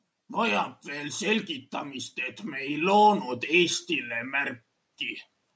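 From 0.27 s to 4.61 s, automatic gain rising: the call's gain control judged the incoming level too low and kept pushing its gain upward, by about 8 dB in total, over more than four seconds. Because the boost is applied to everything the microphone picks up, the speech and the background noise swell together, so the recording seems to creep closer and louder. The call path's band limit, with nothing above 8 kHz, holds steady throughout.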